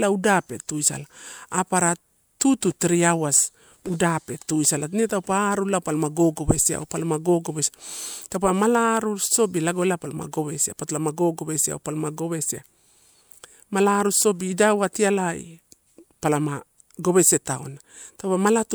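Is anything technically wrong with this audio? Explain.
No, no technical faults.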